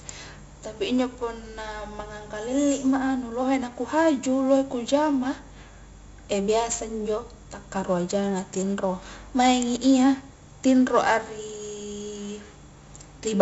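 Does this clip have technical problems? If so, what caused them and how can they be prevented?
Yes. 4-bit ADPCM compression runs through the whole speech clip: each sample is coded as a coarse 4-bit step from a prediction, leaving a gritty, level-following hiss and harsh attacks, with nothing above 7.7 kHz, which fits a 64 kbps ADPCM stream. Keeping the recording in uncompressed PCM or a modern codec would prevent it.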